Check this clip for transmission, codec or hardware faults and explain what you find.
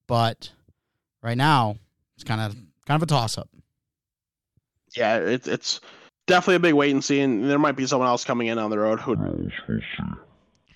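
One fault is audible, a section at the wrong speed, from 9.15 s to the end. The speech there plays at about 0.52 times its recorded rate, likely from being played against the wrong clock, so it drags and drops roughly ten semitones, turning deep and slow.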